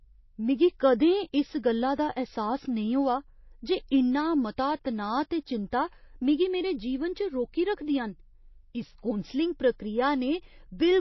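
Throughout the speech, the sound points to likely MP3 compression at a very low bitrate, something like 24 kbps. Starved of bits, the encoder has dropped the top of the spectrum entirely, so nothing is heard above 5.8 kHz, and it has zeroed the weaker frequency lines, which flicker in and out between frames. The result is plainly audible: a dull, watery, swirling quality, with s sounds turned metallic and chirpy and consonant onsets smeared.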